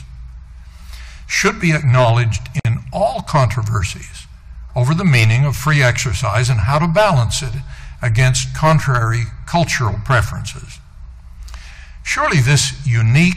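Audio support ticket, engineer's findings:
Gap at a join of encoded pieces, 2.60 to 2.65 s: 54 ms dropout in continuous sound, resuming where it stopped. Separately encoded segments concatenated untrimmed; encoder delay and final-frame padding retained. Waveform: flat run, smeared edges. Spectrogram: full-band vertical blank stripe.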